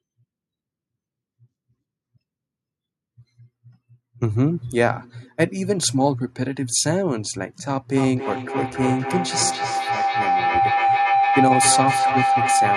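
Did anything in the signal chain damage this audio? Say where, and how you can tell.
Yes. Feedback howl enters at the call stage from 7.97 s to the end, peaking about 2 dB above the speech. Loop gain above unity lets repeats grow and narrow to a tone near 700 Hz, with repeats roughly every 300 ms. A spectrogram shows a brightening horizontal line, and the waveform envelope swells.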